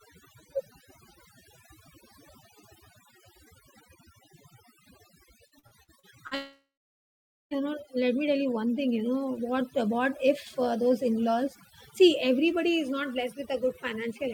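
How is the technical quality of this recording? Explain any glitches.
The recording is degraded by heavy processing across the whole clip and by two network faults in the middle.

Overdone noise removal runs throughout. The noise reduction is set so aggressively that individual frequency bands near the noise estimate get pulled down or switched off, taking the quieter parts of the speech with them. The background drops to near silence speckled with twinkling artefacts.

Repeated packet loss (robotic sound) occurs from 5.47 to 6.34 s. Audio goes missing in six short breaks, the longest about 44 ms, and each one is patched by stretching out the preceding sound. About 28% of that stretch is filled this way, giving a choppy delivery with pieces dropped.

A long network dropout follows from 6.35 to 7.54 s, likely caused by audio failing to arrive over the network for over a second. The last sound is extended as a fading buzz or hiss for roughly 0.3 s, then about 0.84 s of silence follows. 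The speech resumes at "know let me tell", with the intervening portion lost.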